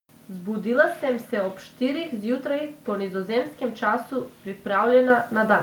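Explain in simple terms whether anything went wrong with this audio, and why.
At 5.1 s the speech and the background suddenly get louder together: the microphone volume stepped up, as the call software raised the microphone's input level in one jump.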